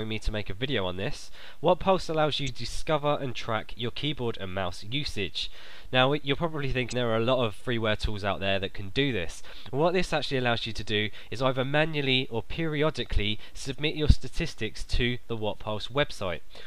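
Damaged data in a compressed stream breaks the sound at 2.45–2.49 s, 6.89–6.93 s and 13.73 s: corrupted bytes make the decoder misread frames and hunt for sync, giving brief glitches.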